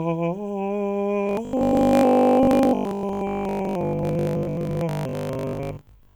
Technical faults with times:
1.23-6.15 robotic sound from repeated short buffers

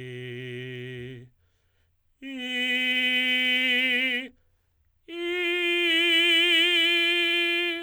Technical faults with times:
0.00-7.82 sample clock jitter

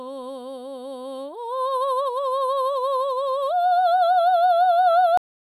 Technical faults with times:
5.17-5.56 cut-off end

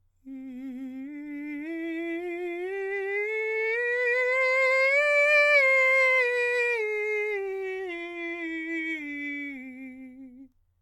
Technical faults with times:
none

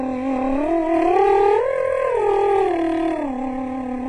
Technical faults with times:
0.00-4.08 HE-AAC compression

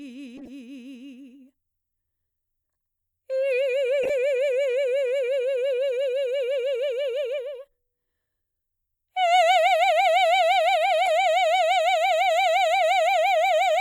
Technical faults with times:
0.37-0.49 corrupt frame decoded
4.03-4.10 corrupt frame decoded
11.06-11.08 corrupt frame decoded

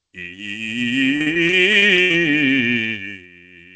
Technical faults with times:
0.00-3.76 noise suppressor applied to music or sounds
0.14-0.63 sound cut by the noise suppressor
1.16-2.19 repeated packet loss (robotic sound)
2.95-3.76 sound cut by the noise suppressor

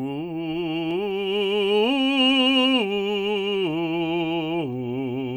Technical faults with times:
1.11 dropped samples
4.61 dropped samples

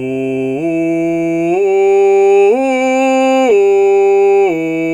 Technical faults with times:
3.23-4.23 repeated stalls (stutter)

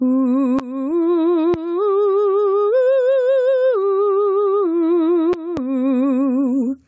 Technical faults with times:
0.00-6.88 gain pumping
0.59-0.61 loud pop
1.54-1.57 loud pop
5.33-5.60 loud pop

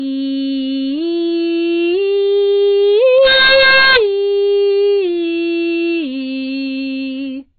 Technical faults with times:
0.00-7.58 low-bitrate audio saved at a high bitrate
3.18-3.97 integer overflow

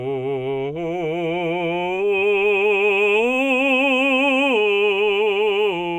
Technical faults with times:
none

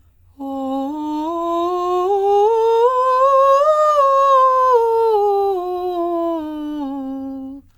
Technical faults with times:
none

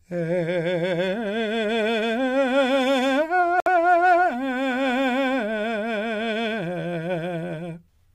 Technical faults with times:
3.60-3.68 Bluetooth stall

